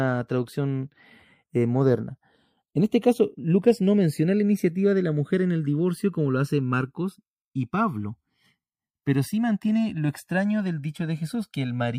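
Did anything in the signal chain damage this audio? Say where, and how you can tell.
Yes. The channels are drifting apart at the converter stage: the two channels come from devices on separate clocks, roughly 100 ppm off, so their offset creeps up over the clip to around 1.5 ms. Summed to mono, the comb notches sweep slowly, giving slow flanging throughout.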